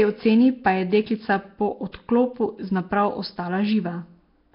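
From start to finish the speech has a rough, hissy halo and a smeared, underwater feel, with nothing above 5.3 kHz. That's likely Nellymoser compression, the old Flash mic codec, filling starved bands with noise, and the heavy damage fits roughly 22 kbps.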